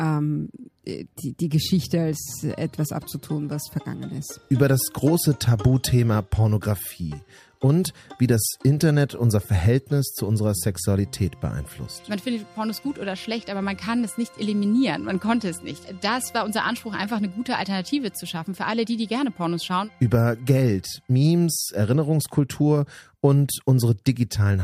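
No technical faults can be heard anywhere in the clip. Nothing in it needs a time stamp or an explanation.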